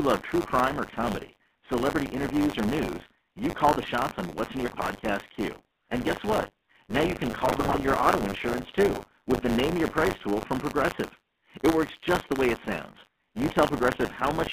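From start to finish the speech carries the GSM full-rate codec's buzzy, gravelly roughness, which fits a 13 kbit/s GSM full-rate stream. The regular-pulse excitation coarsens the voice plainly. On a spectrogram energy sits only between 200 Hz and 3.5 kHz, with nothing above.

Buffer tearing runs throughout as a robotic 100 Hz rattle that is present only while sound is playing. Writer and reader have slipped, so about a tenth of each period replays audio roughly 40 ms old. The waveform shows hard joins every 10 ms, and the spectrogram shows vertical striping at that rate.

From 4.66 to 4.89 s, GSM bit errors break the voice into squawks and gargling. Corrupted filter, pitch and gain values reached the decoder, which points to a burst spanning several frames. The spectrogram shows smeared, misshapen bands there, and the waveform shows sudden jumps in level.

A second burst of GSM bit errors runs from 7.46 to 7.79 s, between "you can" and "your auto insurance too". 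This one is longer and hits more frames, with pops and gargling. The spectrogram shows blotchy, distorted energy, and the waveform shows abrupt spikes in amplitude.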